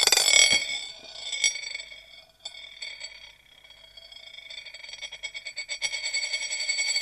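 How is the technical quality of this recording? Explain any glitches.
Nothing here trips the ear as a glitch, so there's no technical problem to explain in this recording.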